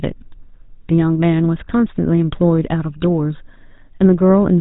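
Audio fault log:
throughout, GSM full-rate codec: the speech has a plainly audible buzzy, gravelly roughness and nothing above 4 kHz, which fits the 13 kbps full-rate mode. The codec rebuilds each sound from a vocal-tract model fed by a sparse, evenly spaced pulse train, so fine detail is replaced by grainy buzz. Plain telephone band-limiting would only sound muffled and smooth, and a band-limited signal by itself would not gain this rough texture.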